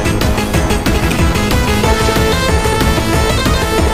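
From 0.37 s to 3.88 s, periodic USB or driver dropouts blank roughly a millisecond every 0.5 s to silence, giving evenly spaced ticks.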